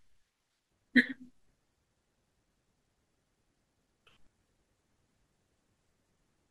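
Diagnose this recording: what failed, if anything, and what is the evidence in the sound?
The codec stage failed: damaged data in a compressed stream gives brief glitches in the speech at 0.83 s and 3.78 s. Corrupted bytes made the decoder misread those frames until it found the next valid header.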